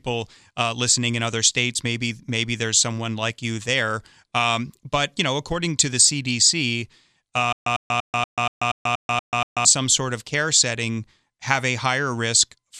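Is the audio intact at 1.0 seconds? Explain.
Yes, at 1.0 seconds the speech is intact, with no dropout, click, distortion or other fault to be heard at that moment.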